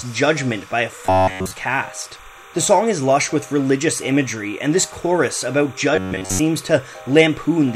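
Running under the whole clip there's timecode bleed: a steady chirping warble sitting roughly 25 dB below the main sound. It's linear timecode leaking in from a neighbouring track or cable, a square wave flipping between tones near 1 kHz and 2 kHz. It's clocking at 30 frames per second, so the chirp has a fast, regular rhythm that never lets up from start to finish.

From 1.06 to 1.53 s, and again from 5.96 to 6.39 s, the sound goes rigid and metallic with a fixed buzz at 93.8 Hz, which fits a repeated chunk of about 10.7 ms. That's robotic sound from repeated short buffers, likely caused by new audio arriving too late so the last slice gets looped while real material is skipped. The first stretch is essentially all repeats. The second is mostly repeats, so a bit more of the original sound comes through.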